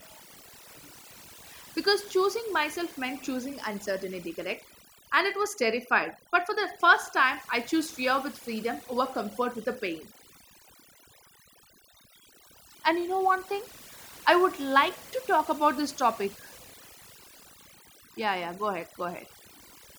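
Overdone noise removal runs from start to end: a noise reduction stage set too aggressively keeps cutting individual frequency bands whenever they sit near its noise estimate. Between phrases the background drops to near silence dotted with twinkling specks, while quiet parts of the voice are cut away with it.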